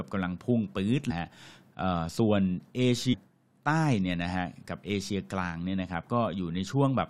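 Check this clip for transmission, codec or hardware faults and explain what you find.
Two brief faults occur, both from damaged data in a compressed stream. At 1.10 to 1.12 s and again at 3.12 to 3.14 s the speech breaks into a short glitch, because corrupted bytes made the decoder misread frames and lose sync until it found the next valid header.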